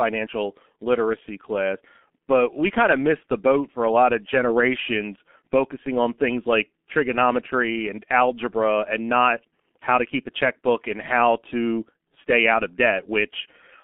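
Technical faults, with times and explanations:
Throughout, G.723.1 codec: the speech is confined to a narrow telephone band of roughly 200 Hz to 3.4 kHz, so it sounds muffled and hoarse, and consonants smear together. This fits a low rate near 6.3 kbit/s, where long frames and a slowly updated voice model cause heavy coding damage.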